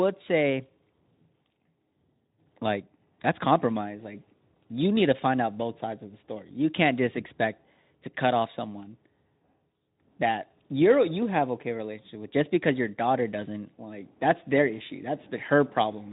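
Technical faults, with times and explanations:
No fault can be heard: the speech is carried at a level and continuity consistent with a working Speex link, its band ends at 3.8 kHz and its light coding texture fits a bitrate around 15 kbps.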